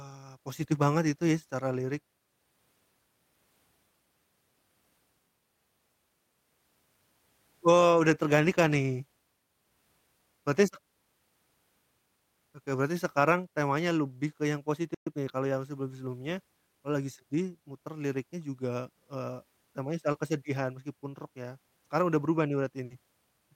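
At 14.94 s the speech cuts to silence until 15.07 s, a 120 ms playback stall, likely the player running short of data. The waveform shows a flat gap.

From 15.07 to 15.55 s, time-compressed catch-up plays the speech 1.25 times faster at unchanged pitch. The spectrogram shows syllables packed closer together, with harmonic spacing unchanged.

Between 20.12 and 20.15 s, short concealed packet loss replaces 20 ms with extended previous sound, a brief smear. The spectrogram shows momentarily frozen, blurred harmonics.

Between 22.85 and 22.91 s, a burst of packet loss fills 50 ms with a fading continuation and then skips ahead. On the spectrogram this appears as a held, dimming band before an abrupt jump.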